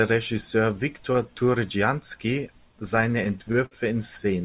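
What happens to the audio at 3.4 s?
Late packets drained the jitter buffer nine times between 2.72 and 3.74 s, so repeated stalls (stutter) drag the speech, with held-over fills up to 54 ms.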